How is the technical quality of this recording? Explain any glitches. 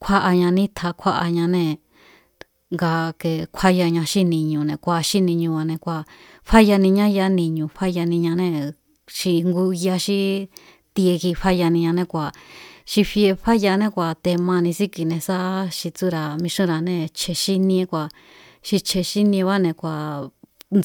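Nothing here sounds off: no glitches turn up anywhere in the recording, so there's nothing to explain.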